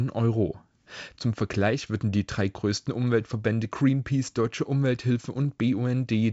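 No faults can be heard anywhere in this speech.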